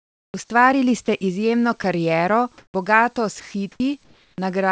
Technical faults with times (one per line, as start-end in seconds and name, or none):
0.00-0.34 comfort noise in place of the background
0.32-0.34 onset clipped by the voice detector
1.06-1.08 sound dropped by the voice detector
1.82-1.84 sound dropped by the voice detector
2.58-2.74 comfort noise in place of the background
2.69-2.74 onset clipped by the voice detector
3.40-4.38 sound chopped by the voice detector